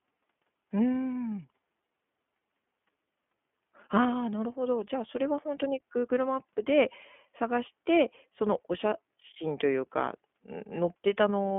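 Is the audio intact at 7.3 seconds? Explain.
No, the iLBC codec squeezes it there like everywhere else: a 200 Hz to 3.4 kHz band, a rough synthetic edge from independently coded 20 ms frames, fitting about 15.2 kbps.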